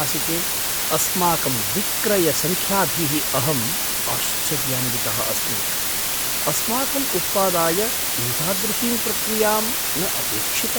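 A constant, even hiss runs from start to finish, roughly as loud as the speech itself, so the talker sits inside a wash of steady white noise rather than above it, yet without any crunchy or gritty distortion. This is low bit depth with dither: the signal was rounded to just 3 bits, and random dither added before that rounding turned the coarse quantization error into uniform broadband noise instead of harmonic grit.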